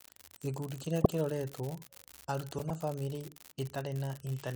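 Speech clip with two separate problems. Under everything there's a steady crackle or fizz that keeps going through the pauses, so it isn't coming from the talker. That's an unreliable data bit. One data line is marginal, and its bit randomly comes out wrong in a share of samples. Because it's always the same bit, every error is a spike of identical size, and that gives the crackle its even, constant texture right across the clip. On top of that there are two short bursts where a corrupt frame got decoded. A compressed frame arrived with flipped bits and the decoder played it anyway, so misread codes or gains put energy at the wrong frequencies for about as long as the damage lasts. The first is at 1.01 to 1.10 s, about 90 ms, and it's the louder one, peaking somewhere around -10 dBFS. The second runs from 2.58 to 2.71 s, about 120 ms, just before "na famĩlĩ", and it's roughly 10 dB quieter. 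Each burst's length points to a handful of consecutive bad frames.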